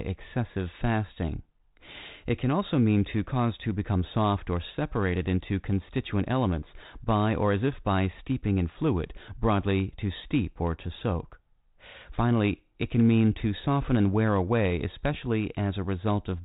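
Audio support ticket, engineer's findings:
No fault found in the speech; the G.726 ADPCM path at 32 kbit/s shows only its expected 4 kHz band limit and light coding noise.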